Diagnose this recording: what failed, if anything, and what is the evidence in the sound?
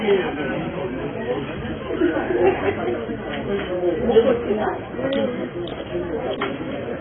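Dull and smeared throughout, with nothing above 3.7 kHz and a warbling texture, likely heavy AAC compression at the codec stage, consistent with AAC-LC starved near 16 kbps.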